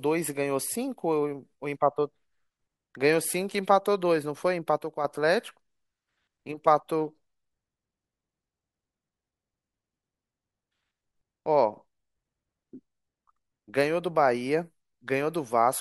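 From 4.78 to 5.05 s the speech drops abruptly by about 6 dB, likely one channel dropping out; the waveform shows a sharp-edged, halved-height step.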